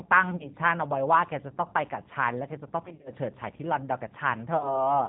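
A rough, slightly synthetic quality runs through the whole of this short speech recording. The top end is missing, nothing above 4 kHz gets through, and the voice has a grainy texture. That is the plainly audible damage of the G.729 codec, which fits an 8 kbit/s G.729A call. The codec does not carry the waveform itself. It rebuilds the voice from a vocal tract filter, a pitch predictor and a few pulses in each 10 ms frame, and so detail and brightness are lost. Three times the voice briefly turns into a stretched tone or coloured noise that fades, then comes back weak or smeared. This happens at 0.36 to 0.49 s, at 2.86 to 3.10 s and at 4.57 to 4.89 s. These are VoIP packet losses concealed by the speech codec. The decoder filled each gap by extending its last pitch and filter settings and lowering the gain as it went. About 40 ms of audio was lost in the first event and about 30 ms in the last. 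The middle event is worse: about 130 ms is missing, scattered over roughly 200 ms, with the longest unbroken gap 50 ms. Each frame is decoded from the state left by the one before, so the voice stays degraded for a short while after the packets arrive again, which is why each event lasts longer than the audio that was actually lost.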